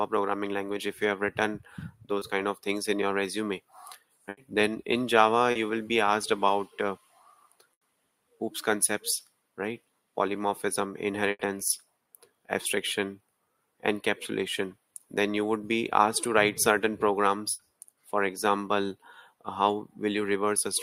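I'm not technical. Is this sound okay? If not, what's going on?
No. Short concealed packet loss occurs at 2.19 to 2.23 s and 5.51 to 5.57 s. Tiny pieces of the audio, 20 ms and then 40 ms, arrived too late, so the player improvised by stretching the last sound, leaving a brief smear or wobble.

A burst of packet loss occurs at 4.29, 7.73, 11.31 and 17.51 s, each about a tenth of a second long. Here 80 ms went missing in a row. The gap was filled by holding the last sound as a fading buzz or hiss, and the audio then jumps ahead, skipping that part.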